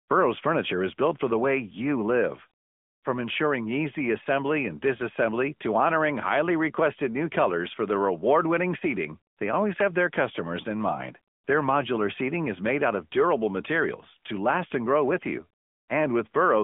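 Speech, and it's been through the AMR narrowband mobile codec (AMR-NB) the whole way. The band sits at roughly 200 Hz to 3.5 kHz with nothing above about 3.7 kHz, so it's thin and boxy like a phone call. The codec damage is plainly audible: a buzzy, synthetic edge from the vocal-tract model rebuilding the voice from a few pulses per subframe, which fits a mid-range mode around 10.2 kbps.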